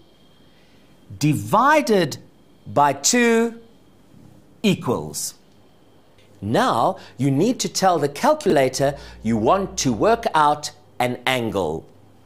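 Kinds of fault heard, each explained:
Chunks out of order: Between 8.46 and 8.52 s, a short stretch of sound plays in the wrong sequence. One block of about 20 ms arrived late and plays two chunks after its proper place. Nothing is lost, but the order is scrambled for that instant. Moving one block creates three hard joins where the waveform jumps, within a brief jumbled moment. The 20 ms step fits audio handled in fixed-size blocks.
Mains hum: From about 8.75 to 10.25 s, a steady low tone sits under the sound. It is at 60 Hz, the frequency of the power line, with some low harmonics above it. Electricity from the supply is leaking into the signal path, through a ground loop or a nearby transformer. The hum runs at about 25 dB below the sound. That is low enough to sit underneath as a constant drone for the whole span.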